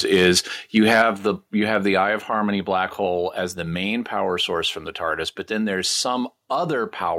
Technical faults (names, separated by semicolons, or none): microphone overload; microphone volume stepped down